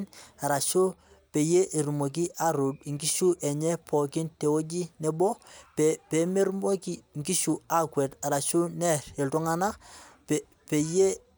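No technical fault can be heard anywhere in this speech recording, and the signal stays stable and continuous throughout.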